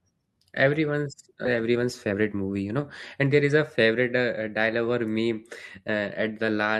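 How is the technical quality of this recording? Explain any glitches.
The recording has three timing glitches in the first four seconds: one abrupt jump forward and two stretches where the speech runs fast.

Skip ahead, 1.45 to 1.47 s: roughly a second of speech was discarded, most likely by an overflowing jitter buffer while later audio was already queued. Playback splices the two sides together with no gap, so the speech lurches forward mid-flow.

Jitter buffer speed-up, 1.61 to 2.79 s and 3.23 to 3.92 s: the buffer was still holding too much audio, so the receiver trimmed short pitch-period slices repeatedly to reduce delay. The first stretch runs at 114% speed and loses about 200 ms. The second runs at 107% and loses about 50 ms. The pitch stays unchanged while the delivery sounds hurried.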